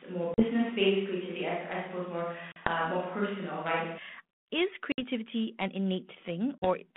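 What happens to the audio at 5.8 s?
At 5.8 s the speech is intact, with nothing beyond the narrow telephone band and light coding texture of the 32 kbit/s G.726 ADPCM line it runs over.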